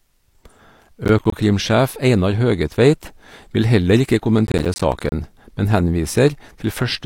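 The processor fell behind on its short audio buffers, missing deadline after deadline and leaving tiny silent gaps, which points to buffers of around 10 ms. This processor overload crackle tears through the speech as gritty bursts from 1.05 to 1.32 s and, longer, 4.47 to 5.12 s.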